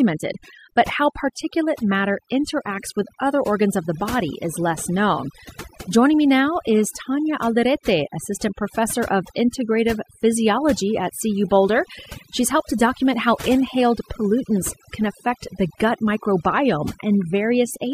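A speech recording suffering from overdone noise removal from start to finish. A noise reduction stage set far too aggressively has pushed every frequency band that sits near its noise estimate down to almost nothing, taking the quieter parts of the voice along with it. The gaps between phrases fall to near silence scattered with twinkling specks. On a spectrogram the background shows as dark, empty areas sprinkled with isolated bright dots, while the speech harmonics look ragged and broken at their weaker edges instead of continuous.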